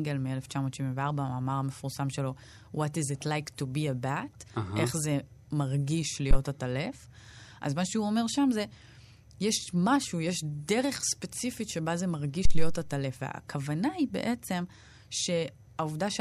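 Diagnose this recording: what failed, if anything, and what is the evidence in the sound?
Phantom power thump, in the analogue input stage. Deep thumps hit the speech at 6.31–6.36 s and 12.45–12.83 s, both peaking at about -11 dBFS. They decay over 12 ms and 85 ms. A supply switched on a live input pushes a voltage step through the coupling capacitors.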